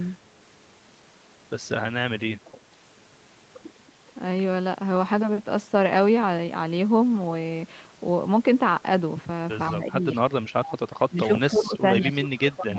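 The speech sinks at 2.19 to 2.38 s, then again from 9.7 to 11.31 s, 11.5 to 11.77 s and 12.04 s to the end. Each time it is pushed down by roughly 25 dB (closer to 15 dB in the 11.5 s dip) and comes through thin and broken. This is speech suppressed in double talk, likely from an echo canceller that confused the near talker with loudspeaker echo while both sides spoke.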